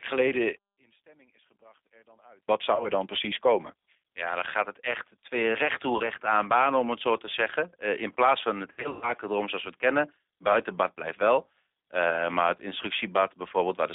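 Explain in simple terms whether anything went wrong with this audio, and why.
G.729 codec, across the whole 14-second recording: the speech was squeezed through a low-rate phone-call codec that rebuilds the voice from a simple model of the throat and pitch rather than keeping the real sound. Only the band from about 300 Hz to 3.7 kHz survives, so the voice sounds narrow, a little rough and synthetic, and the damage is plainly audible rather than subtle.

One channel inverted, from 0.57 to 2.48 s: the sound almost disappears for about two seconds, leaving only a faint trace. This is likely because one side of a stereo signal had its polarity flipped, and when the two sides were combined into one, the shared part, including the centred voice, cancelled itself out.

VoIP packet loss concealed by the speech codec, at 2.75 to 2.89 s, 5.97 to 6.10 s, 8.72 to 9.13 s and 12.10 to 12.27 s: small chunks of the call never arrived, each 30 ms long in the single dropouts. 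The decoder filled each gap by stretching the last sound it had into a buzzy tone or coloured noise that fades. The 8.72 s patch is the worst, with several losses scattered over about 0.3 s, the longest gap about 0.12 s. After each dropout the voice stays weak or smeared briefly while the decoder recovers.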